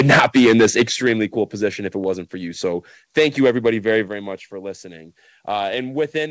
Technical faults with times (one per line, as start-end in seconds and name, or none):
0.00-1.12 microphone overload
1.02 microphone volume stepped down
3.17-3.97 microphone overload
4.08 microphone volume stepped down